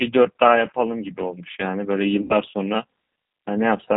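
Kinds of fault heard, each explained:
G.729 codec: Speech squeezed through a low-rate model of the vocal tract, which fits 8 kbit/s G.729A. Nothing above 4 kHz, and the rough, synthetic edge is plainly audible.
VoIP packet loss concealed by the speech codec: Around 2.22 to 2.36 s, about 80 ms goes missing, which fits four lost packets. The decoder stretches the last sound into a fading buzzy tone or coloured noise.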